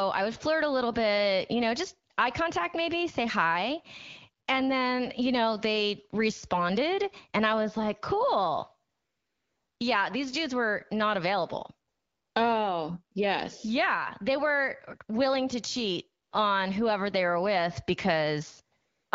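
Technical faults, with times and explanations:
2.13–2.17, 4.45, 8.91–9.79, 11.89–12.35, 16.23–16.31 and 18.77–19.11 s, AMR comfort noise: the phone judged these gaps silent and stopped sending speech, so the receiver filled them with steady synthetic noise that switches in and out. The longest gap follows "I was like cool".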